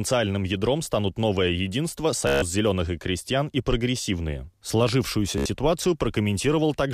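Bluetooth packets went missing twice, so the receiver replayed its last short slice until data resumed. From 2.27 to 2.42 s, between "ядром станут новое единство" and "зеленых и крестьян и", this Bluetooth stutter buzzes for about 145 ms, then again at 5.38 to 5.46 s for about 73 ms, skipping ahead afterwards.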